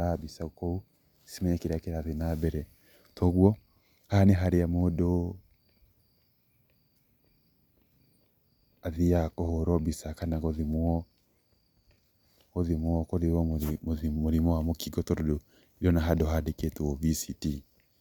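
No technical faults are audible anywhere in the recording.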